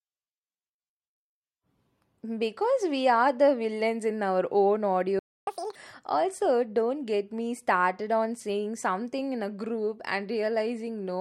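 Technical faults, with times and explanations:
5.19–5.47 s, playback stall: the speech cuts off mid-flow and the output goes fully silent for about 280 ms before sound returns. The likely cause is the player running dry of buffered data, or its audio thread being blocked, so nothing reached the output until it recovered. On a waveform this is a flat, silent stretch beginning abruptly. On a spectrogram it is an empty vertical band across all frequencies, with no decay or fade at either edge.
5.47–5.75 s, catch-up at higher speed: right after the silence, the speech resumes at double speed and is pitched up by nearly ten semitones for roughly 0.28 s, then snaps back to normal rate. The player is racing through its backlog by resampling, which raises tempo and pitch together, giving the brief chipmunk-like squeak. On a spectrogram the harmonics and formants shift sharply upward and sit closer together in time. 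The waveform shows compressed, denser cycles until 5.75 s.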